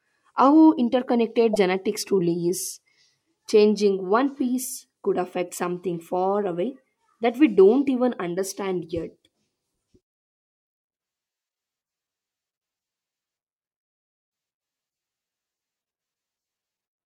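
At 1.53–1.56 s, and again at 5.46–5.50 s between "piece could" and "something far away that", damaged data in a compressed stream makes the decoder lose sync, producing brief glitches.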